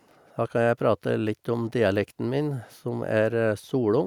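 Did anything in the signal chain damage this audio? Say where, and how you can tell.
No, the signal chain shows no audible damage anywhere.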